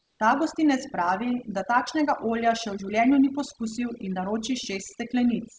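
Across the whole speech clip the background is pushed down and breaks up into twinkling specks. This is overdone noise removal: the suppressor was set too aggressively, so individual frequency bands that dipped close to its noise estimate were cut hard or shut off, taking quieter parts of the voice with them and leaving isolated bands flickering in and out. In the opening 0.2 seconds, from 0.00 to 0.20 s, the background is a smooth, featureless hiss sitting about 52 dB below the loudest speech, with no step in level when the real audio begins. That steady texture is most likely comfort noise in place of the background: during a detected pause the sender stops sending audio apart from an occasional update, and the receiver fills the gap with synthetic noise shaped to resemble the room, so its detail is lost. Nothing is heard above 8 kHz, which fits a wideband call codec such as G.722 running at 64 kbps.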